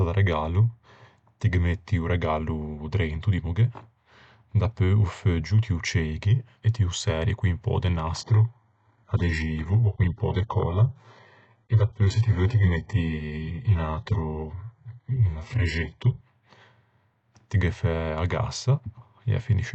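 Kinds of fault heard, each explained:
Adaptive stream at a lower bitrate: From 8.2 s to 16.2 s the speech abruptly loses its treble, with nothing above 8 kHz, and takes on a thin, synthetic, artefact-laden quality. Quality returns just as suddenly, and there is no gap at either change. This eight-second stretch is the player dropping to a lower-bitrate rendition when the connection slowed. The sound points to a switch from a 96 kbit/s AAC stream to an HE-AAC stream near 8 kbit/s.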